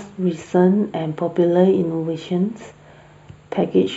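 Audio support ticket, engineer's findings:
Speech sounds hollow throughout, start to end. Channel delay (comb filtering). One channel lags the other by roughly a tenth of a millisecond, which fits an offset of a few samples. Fold to mono cancels shared content at evenly spaced frequencies, first notch near 5 kHz. Probable component: stereo-to-mono summing stage. Check channel alignment before the downmix.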